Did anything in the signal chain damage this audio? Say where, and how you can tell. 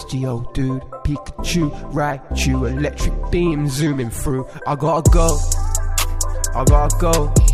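No, nothing in the signal chain damaged this audio.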